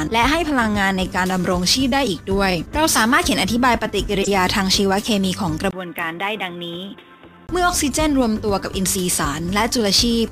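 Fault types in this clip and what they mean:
Sample clock jitter: The converter's clock wanders, so each sample lands slightly off its proper instant. The timing error is tiny, a few microseconds, but it grows with how steeply the waveform moves. Here it leaves a faint hiss and roughness across the whole clip, around 25 dB below the sound. It thickens on loud and bright passages and disappears in the gaps.
Corrupt frame decoded: Damaged bits in a compressed frame were decoded and played anyway. Misread values scatter energy into the wrong frequencies for the frame's duration. From 4.22 to 4.28 s there is a burst lasting about as long as a couple of frames, peaking near -5 dBFS, loud and sharp. At 5.98 s a shorter blip peaks near -15 dBFS, heard during the duller stretch.
Input switched to a poorer device: From 5.71 to 7.49 s the sound turns dull and boxy. Nothing remains above 3.8 kHz, the level falls by about 5 dB, and a new background noise appears roughly 50 dB under the sound. 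A 20 ms silence marks the change. This points to the recording likely jumping to a narrower-band microphone or headset, then returning to the original input.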